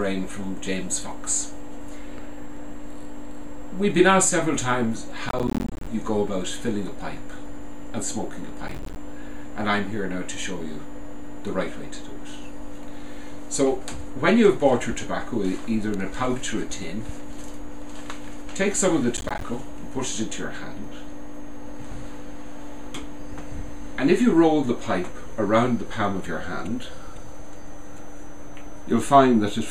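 Processor overload crackle occurs three times: from 5.29 to 5.87 s, from 8.68 to 8.96 s, and from 19.17 to 19.42 s. In each burst the processing falls behind and repeatedly misses buffer deadlines, dropping short blocks of silence into the signal. These hard-edged gaps produce a gritty tearing crackle over the audio. The spacing fits buffers of around 10 ms, and the first and longest burst points to a few dozen misses.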